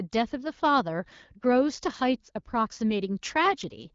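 No technical faults can be heard in the speech, which carries the bandwidth of the AMR wideband (HD Voice) codec, with nothing above 7.5 kHz and only a light coding texture that fits the 12.65 kbit/s mode.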